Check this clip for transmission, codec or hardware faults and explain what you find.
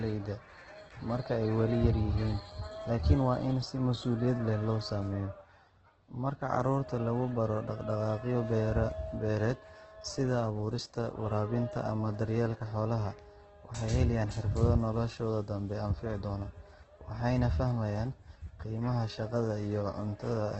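One codec fault runs through the entire speech recording; no transmission dropouts or hardware faults stand out.

Opus compression, from start to end: the roughness is likely from an Opus encoder in its music-style CELT mode, starved of bits in a way that fits about 12 kbps. It keeps each band's energy but fills the detail with folded or noise-like content, so the speech sounds grainy, rough and noisy rather than swirly. A spectrogram shows a hard ceiling near 8.2 kHz, with smeared, noisy texture instead of clean harmonics below it.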